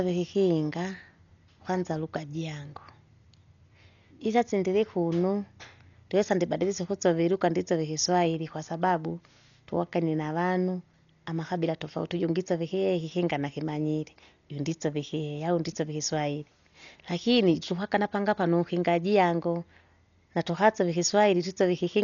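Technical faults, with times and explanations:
Throughout, Dolby Digital compression: the speech is dull with nothing above 6.9 kHz, and rough, fluttering noise surrounds tones. Likely a starved encoder leaving lines empty for the decoder to fill with dither.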